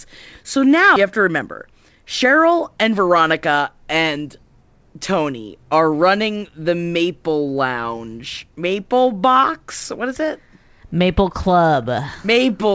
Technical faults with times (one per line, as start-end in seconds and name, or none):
0.96-0.98 skip ahead
1.20-2.55 jitter buffer speed-up